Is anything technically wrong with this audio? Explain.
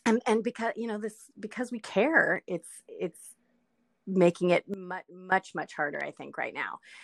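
Yes. A sudden gain jump runs from 4.74 to 5.32 s: the speech and its background noise drop together by about 15 dB from one sample to the next, then return. The likely cause is a level change applied digitally with no ramp to smooth it.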